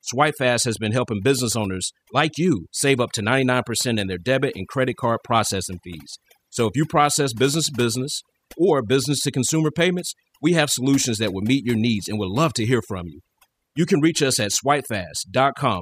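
Speech, with overdone noise removal through the whole clip. The noise reduction was set too strong. It pushes narrow frequency bands down or out whenever they sit near its noise estimate, and quiet parts of the voice vanish with them. The gaps fall to near silence with twinkling specks. Clock slip clicks run from 0.24 s to 15.66 s. They arrive about every 0.2 s, some seventy in all, as faint regular ticks. Each is a single dropped or repeated sample. They stand out on loud, sustained sound and disappear in pauses. The steady rate likely comes from two unsynchronised device clocks, differing by around 100 ppm, so a whole sample of error builds up roughly five times a second.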